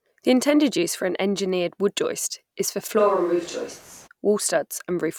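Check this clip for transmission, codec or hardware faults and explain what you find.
There's one fault worth flagging. Right after "wood joist is for", from 3.01 to 4.06 s, there's a switch to a distant microphone. The sound turns roomy and hollow and thins out in the bass. The level holds about steady, but room noise rises to roughly 30 dB under the speech. The likely cause is the close mic's feed dropping out, leaving a further-off mic to carry it before it snaps back.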